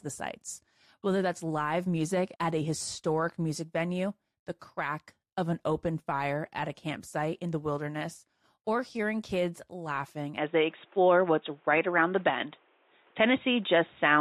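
At 10.38 s the speech abruptly loses its top end and stays that way to the end of the clip, with nothing above 3.8 kHz. The sound turns dull and boxy with no gap at the transition, the level shifts by roughly 5 dB, and a new background noise floor appears around 35 dB below the speech. This is most likely an input switched to a poorer device, such as another microphone or a headset's call profile.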